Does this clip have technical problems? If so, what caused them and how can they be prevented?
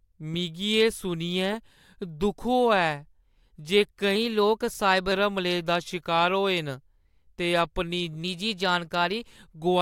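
Yes. A drift correction step occurs from 4.16 to 5.12 s and again from 8.24 to 9.27 s: the speech abruptly runs about 6.45% fast, its pitch rising by 108 cents, slightly over a semitone, before snapping back. This is likely clock-matching software that abruptly changed its playback rate to refill or drain its buffer. Adjusting the rate gradually and in small increments, or sharing a common clock, prevents it.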